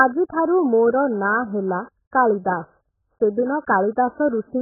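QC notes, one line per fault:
Throughout, AAC compression: dull, smeared speech with fizzy, warbling sibilants and nothing above 1.7 kHz, likely from heavy low-bitrate AAC-LC coding, which fits about 8 kbps.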